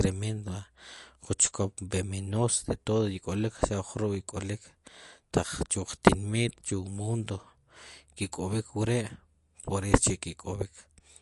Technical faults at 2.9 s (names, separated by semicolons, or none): MP3 compression